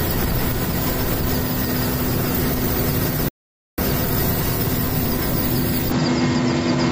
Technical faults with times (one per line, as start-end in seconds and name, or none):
3.28-3.78 playback stall
5.92-6.92 input switched to a poorer device